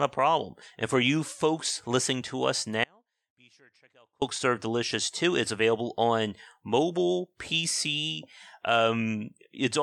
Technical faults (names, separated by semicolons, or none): audio dropout to a faint residue